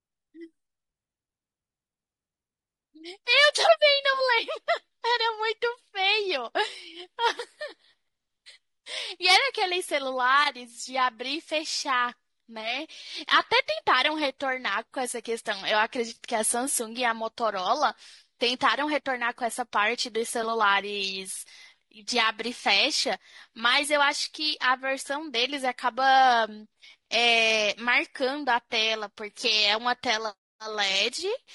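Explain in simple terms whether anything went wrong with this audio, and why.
The speech sounds rough and grainy from start to finish. There is a hiss between the voice's tones, and the upper range sounds thin and artificial. This is likely low-delay AAC compression, a video-call codec that here squeezes sound into too few bits and so blurs voice detail.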